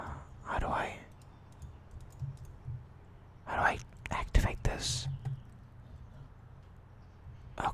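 Nothing technically wrong to report anywhere in this audio.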